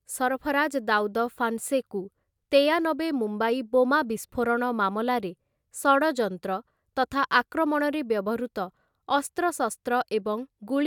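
No technical faults can be heard anywhere in the speech.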